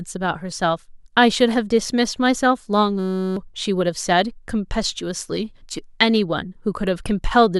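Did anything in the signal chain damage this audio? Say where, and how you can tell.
Yes. A system hang loop runs from 2.99 to 3.37 s, in the driver or buffer stage: a 5.33 ms slice of speech repeats dozens of times as a steady 188 Hz buzz, which fits a stalled driver leaving the hardware cycling a 256-sample buffer, replacing roughly 0.4 s of speech.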